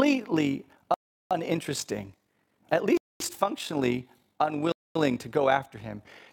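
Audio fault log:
Throughout, overlap-add ripple: level pulses by about 6 dB roughly 50 times a second, a rough robotic flutter from reassembled frames whose overlap doesn't sum evenly.
0.94–1.31 s, 2.97–3.20 s, 4.72–4.95 s, Bluetooth stall: sound cuts to silence for 0.37, 0.23 and 0.23 s, then resumes, likely the headphone buffer emptying while delayed packets were resent.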